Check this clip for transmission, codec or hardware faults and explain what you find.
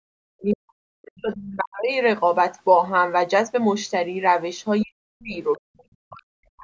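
The speech has two echo-control faults.

Speech suppressed in double talk occurs from the start to 1.91 s, from 4.83 to 5.38 s, and from 5.7 s to the end. The talker's level falls sharply, by roughly 40 dB at its deepest. Parts of the speech nearly vanish. The likely cause is the echo canceller meeting both sides talking at once. It cannot tell the local voice from loudspeaker echo, so it turns everything down.

The other side's voice leaks through at 1.16 to 1.21 s, 5.56 to 5.6 s, and 5.78 to 5.83 s. Each is a brief scrap of a second voice, far quieter than the talker. These bursts likely come from loudspeaker sound the echo canceller failed to remove from the microphone. They are short. The call's microphone processing, with nothing above 8 kHz, is the normal band limit.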